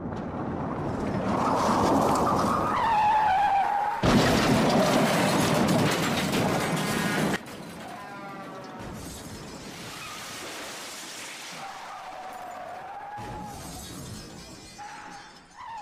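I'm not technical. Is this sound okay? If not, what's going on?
No. At 7.36 seconds the whole recording suddenly drops much quieter, and it stays that way to the end. The sound and the background noise fall together in one instant rather than fading down. This is a sudden gain jump: the volume was likely changed digitally in a single step, with no gradual transition, so the level halves and more from one moment to the next.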